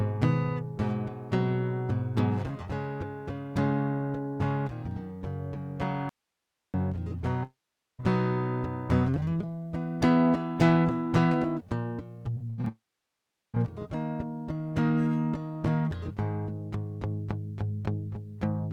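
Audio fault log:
6.09–6.74 s, audio dropout to a faint residue: the music signal was lost for about 0.65 s, likely a momentary break in the source connection while the path downstream stayed live. The music cuts off abruptly mid-flow, and the gap holds only hiss about 55 dB below the music's level. Because the later stages kept running, the hole sounds like an open, empty input rather than a fade or a pause.
7.43–8.00 s and 12.68–13.55 s, long network dropout: audio stopped arriving, likely because of a stall on the network link, so about 0.56 s and then about 0.86 s of the music were never played. In each case the receiver first stretched the last sound into a buzzy, fading tail, then fell to silence for roughly 0.44 s and 0.74 s. The music resumes further along, with the lost passage skipped.
12.34–12.68 s, repeated packet loss (robotic sound): audio data went missing again and again just before the second long dropout, leaving five short holes, the longest 80 ms, and about 140 ms lost in all. 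Each hole was patched by extending the preceding sound, so concealment covers about 41% of this span. The result is choppy music with fragments missing, which runs straight into the longer break.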